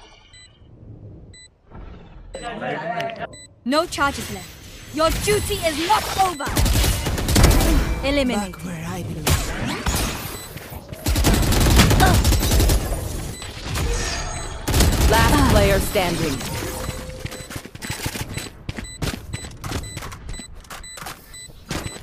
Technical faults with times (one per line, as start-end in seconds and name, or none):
none